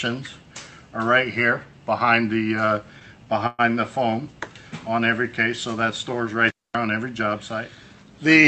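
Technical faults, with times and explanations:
3.47–3.61 s, call audio freeze. The sound stalls for about 117 ms, carried on by a fading buzzy tail that drops to near silence for roughly 10 ms. The cause is likely packets arriving late, so the jitter buffer ran dry and the receiver stretched the last sound to cover the wait. When audio resumes it picks up exactly where it stopped, so nothing is lost. The rest of the clip runs about 117 ms later. The call path itself is audible only as coding grain and an 8 kHz top end, which fits Opus at around 32 kbps.
6.48–6.75 s, intermittent contact. The signal drops out for about 225 ms, with a crackle as it opens and another as it closes. A loose plug or cable broke the connection for a moment. While it was open, a faint hiss got through. The clicks come from the contact scraping as it separates and rejoins. The cutout is abrupt at both ends rather than faded, which is what sets it apart from the freeze.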